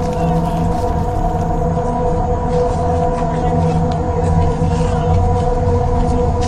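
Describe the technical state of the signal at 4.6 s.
At 4.6 s the audio sits inside a stretch where the adaptive stream is at a lower bitrate. The stretch runs from 1.69 s to the end of the clip. The quality changes suddenly at 1.69 s, with no gap. The connection slowed, so the player switched to a leaner version of the stream. The treble is gone above 9.8 kHz, and coding artefacts are stronger. The sound points to a drop from about 96 to 32 kbit/s.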